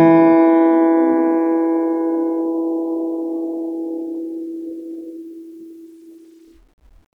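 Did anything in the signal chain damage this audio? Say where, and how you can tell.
No, nothing in the signal chain damaged this music.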